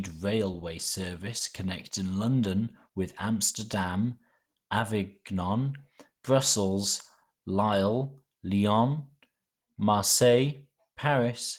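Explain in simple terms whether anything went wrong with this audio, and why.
Opus compression damage runs through the whole speech clip, from start to finish, and is plainly audible as a rough, grainy, hoarse edge. This is likely from squeezing the audio into very little data. The encoder handles the lower part of the voice with a speech-focused method and the upper part separately, rebuilding detail by approximation. The full treble range is still present, but it sounds coarse and noisy.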